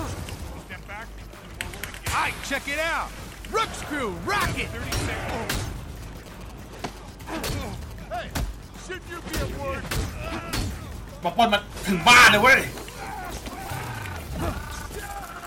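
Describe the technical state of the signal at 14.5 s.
At 14.5 s the signal is intact, with no dropouts, clicks, distortion or other faults audible.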